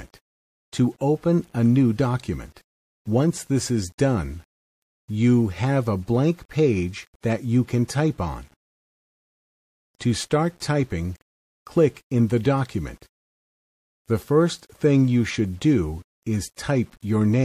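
A grainy distortion that follows the sound runs through the whole clip, with quiet passages turning gritty and sputtery; this is low bit depth without dither, likely 8-bit rounding with error about 40 dB below the signal. Three attacks, at 7.21–7.23 s, 9.98–10.00 s and 16.56–16.58 s, arrive softened behind a brief hiss lasting 20, 27 and 25 ms and rising by about 29, 24 and 34 dB. This is pre-echo: quantisation noise spread across a transform block, consistent with roughly 36 ms blocks and no switch to short blocks at the attacks.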